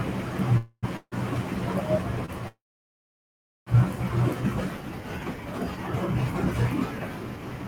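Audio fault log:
0.57–0.85 s and 0.97–1.14 s, call audio freeze: the sound hangs as a fading buzz for about 0.25 s and then 0.15 s, each trailing off into roughly 40 ms of silence before resuming exactly where it stopped. Nothing is lost, but each pause adds delay. The likely cause is packets held up in transit, leaving the jitter buffer empty while the receiver extended the last sound.
2.26–2.30 s, short stall from a late packet: a brief smear where one instant is held about 25 ms too long, before the audio continues seamlessly. A single packet missed its playout time, so the receiver stretched what it already had until that packet arrived. The audio loses nothing but runs slightly later from this point.
2.48–3.68 s, call audio freeze: a short buzzy tail quickly dies into more than a second of silence, about 1.09 s, before the audio picks up from the same point. The gap totals about 1.18 s with no audio skipped, just pushed later. 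This likely reflects a long hold-up in packet delivery that drained the jitter buffer well past what concealment could cover.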